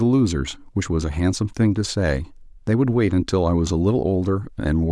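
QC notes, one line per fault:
No faults found in this speech clip. Nothing here needs a timed entry.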